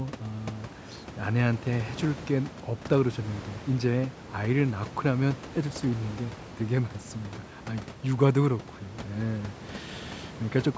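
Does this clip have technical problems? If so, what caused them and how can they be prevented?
No, there's nothing wrong here: the speech has gone through ordinary call microphone processing, which leaves nothing above 8 kHz, and the room noise sits about 17 dB below the voice, so there's nothing that needs preventing.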